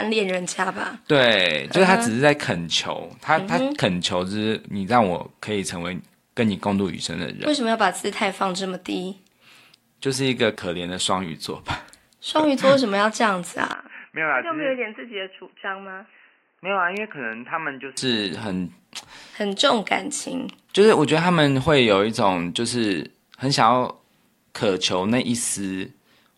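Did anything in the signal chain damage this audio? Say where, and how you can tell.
Yes. At 13.73 s the speech abruptly narrows to nothing above 3 kHz, drops by about 10 dB and gains a new noise floor roughly 40 dB below it, with no gap at the change. It recovers at 17.97 s. That points to the input switched to a poorer device at the capture stage, likely a headset's call profile or a lesser microphone, whose narrower band and its own noise and gain make the voice dull and boxy for those four seconds.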